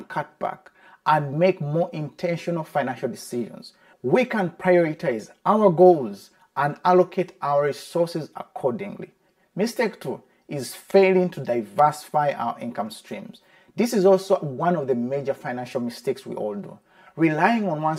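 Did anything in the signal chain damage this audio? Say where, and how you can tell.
Yes. Channel delay (comb filtering) runs through the whole clip, likely from a buffer or driver stage offsetting one channel by about 5 ms before a mono sum. The result is hollow and phasey, with fixed notches near 100 Hz and every 200 Hz above. Unlike room reverb or flanging, the notches never drift.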